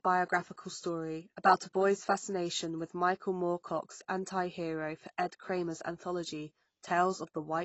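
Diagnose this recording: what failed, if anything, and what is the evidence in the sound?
AAC compression throughout, a codec-stage fault: the speech sounds dull and smeared with nothing above 8 kHz, likely from AAC-LC at a low bitrate near 24 kbps.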